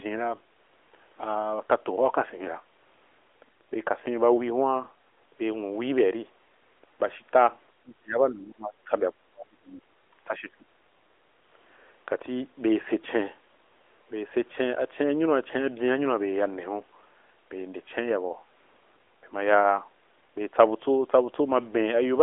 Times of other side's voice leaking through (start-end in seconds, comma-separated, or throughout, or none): 8.37-8.53